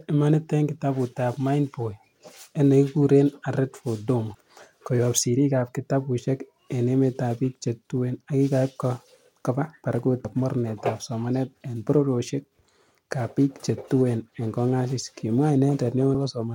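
Audio missing between chunks at 10.25 s: the speech skips abruptly forward with no silence in between, losing about a tenth of a second just before "mornetab somanet en bororiosiekab". The likely cause is a recorder working in 6-second chunks that drops audio at the boundary.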